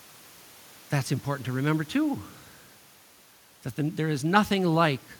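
A speech recording with nothing technically wrong with it, the room's background noise sitting about 30 dB below the voice.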